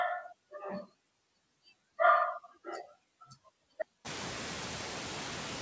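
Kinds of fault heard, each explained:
Noise suppressor artifacts: background noise dips between phrases and swells under speech, because a frame-by-frame suppressor cuts steady noise by about 11 dB.
Audio dropout to silence: from 3.82 s to the end, sound cuts to silence with no room tone, likely a lost input while zeros kept being written.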